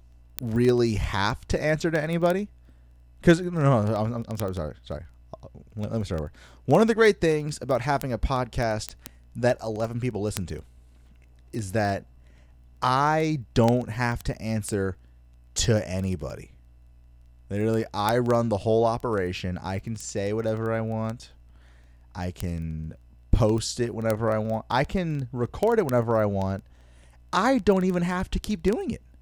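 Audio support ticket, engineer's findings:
Receiving device on digital input not locked to sender's word clock; clock offset around 500 ppm. Single-sample slip at each drift cycle, heard as word clock ticks roughly every 0.04 s through the speech, 0.12 s to 29.21 s, about 700 ticks total.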